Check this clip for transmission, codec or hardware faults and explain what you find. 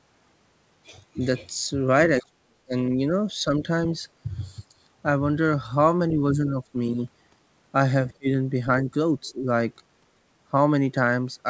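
One fault recurs: the speech is turned down four times, at 2.21 to 2.73 s, 6.52 to 6.75 s, 8.17 to 8.28 s and 9.26 to 9.45 s. The first and third dips are deep, around 40 dB and 35 dB, and the other two are shallow. This is likely speech suppressed in double talk: with both ends talking, the echo canceller mistook this talker for loudspeaker echo and attenuated everything. Unlike packet loss, the level dips and then recovers. The G.722 path leaves nothing above 8 kHz.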